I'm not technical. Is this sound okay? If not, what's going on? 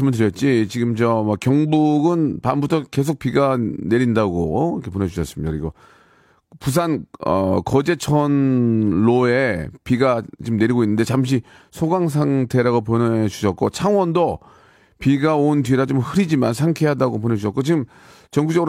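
Yes, nothing stood out as a problem when listening to this recording.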